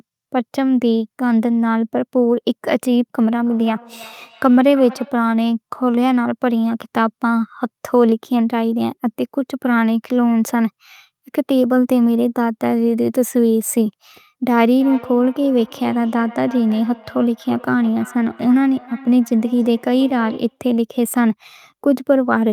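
Speech, with a feedback echo between two devices from 3.46 to 5.33 s and again from 14.8 to 20.62 s. In both stretches the talk comes back as a delayed copy roughly every 300 ms, its loudest return about 20 dB below the speech. Two devices in the same room are on the call: one plays back what the other's microphone sent, that microphone picks it up again, and neither device's echo canceller removes sound played by the other.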